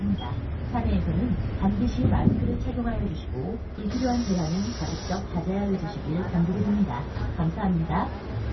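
MP3 compression damage runs throughout, and it is heavy: nothing reaches above about 5.9 kHz, leaving the sound dull and watery, with swirling, metallic chirps where weak frequency lines drop in and out. This likely comes from an MP3 encoder starved of bits, consistent with roughly 24 kbps.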